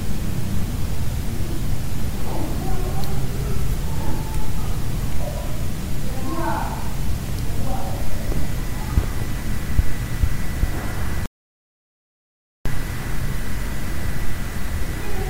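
The input was likely lost, leaving silence written from 11.26 to 12.66 s: an audio dropout to silence, cutting the sound dead for 1.4 s with no room tone.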